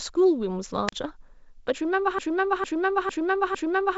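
At 0.87 s a wireless microphone squelch dropout cuts in: the FM link fades, a short lift of hiss gives way to a near-silent gap of about 36 ms, and the speech resumes by 0.92 s as the receiver's squelch reopens.

From 2.19 s to the end, a broken-record loop takes over. A fragment of about 0.45 s repeats exactly, back to back, four times, with the speech that should follow lost. The likely cause is a stalled player, encoder or stream resending its last buffer.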